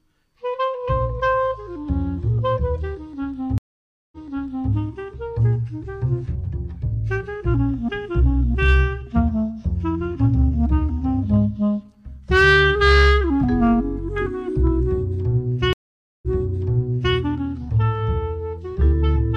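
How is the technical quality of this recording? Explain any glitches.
The recording has two dropouts where the stream breaks and restarts, and five short stretches of hard clipping.

Stream reconnect, 3.58 to 4.72 s and 15.73 to 17.15 s: the sound goes silent for about 0.54 s, then 0.49 s, and comes back fading in at an earlier point, repeating about 0.6 s and then about 0.93 s of material. The connection dropped and the player reconnected, starting a fresh decoder mid-stream. The server resent a burst of already-played audio, so the sound steps back in time.

Hard clipping occurs at 8.63 to 8.80 s, 10.25 to 10.75 s, 11.34 to 11.37 s, 12.32 to 13.16 s and at 14.67 s. The loudest moments are pushed past what a stage in the chain can pass, by about 1 to 4 dB, most at 12.32 s. Their peaks are sliced flat, and the squared-off tops add high harmonics that sound as distortion on those peaks.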